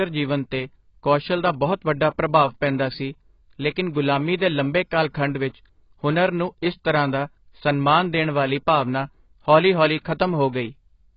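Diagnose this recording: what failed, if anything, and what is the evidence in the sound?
The speech sounds dull and muffled for the whole clip, with nothing above about 5.2 kHz, and sibilants and sustained vowels carry a watery, warbling smear. The fault sits at the codec stage and is likely AAC compression at a very low bitrate, around 16 kbps. At that rate the encoder drops its cut-off and leaves gaps between the bands it keeps, so the top end vanishes and the remaining detail shimmers from frame to frame.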